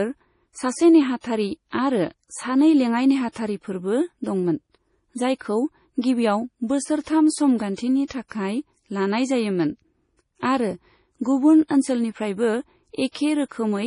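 From start to finish the speech carries heavy MP3 compression damage, likely from encoding at a very low bitrate, which fits something near 32 kbps. Nothing survives above 10.5 kHz, so the treble is sharply cut and s sounds turn dull and swirly, with a watery, metallic chirp as weak frequency lines drop in and out between frames. On a spectrogram this shows as a flat ceiling at 10.5 kHz over speckled, holey upper bands, and attacks smear in time.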